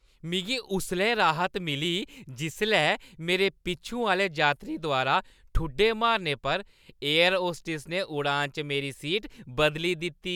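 A speech recording with no audible technical faults.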